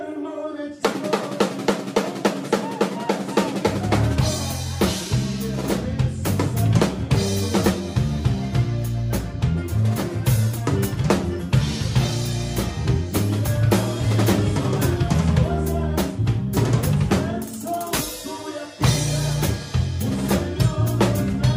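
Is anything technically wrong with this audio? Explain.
No, no technical faults heard.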